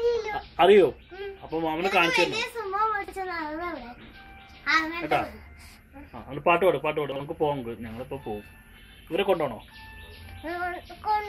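At 3.04 to 3.12 s and again at 7.12 to 7.20 s, chunks play out of order: a 40 ms block arrives one chunk late and swaps places with its neighbour. Nothing is dropped, but the rearranged sequence sounds briefly jumbled.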